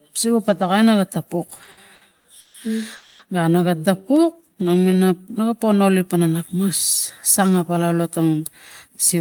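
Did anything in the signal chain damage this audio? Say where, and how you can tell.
Yes. Repeated stalls (stutter) from 1.47 to 2.56 s, after "naga tapuk": ten short gaps, longest 140 ms, filling 370 ms. The network jitter buffer kept running empty and stretching the last sound.

Call audio freeze at 2.96 to 3.21 s: 230 ms of continued sound, no silence, nothing lost afterwards. Packets were likely held up in the network, adding 230 ms delay.

Jitter buffer slow-down from 4.22 to 5.06 s, before "na ga po nolik": playback at 89% speed, pitch unchanged, 96 ms added as the receiver repeated pitch periods to rebuild its reserve.

Jitter buffer speed-up from 7.39 to 8.41 s: audio hurries at 109% speed, same pitch, as the receiver trims around a tenth of a second of pitch periods to shed excess delay.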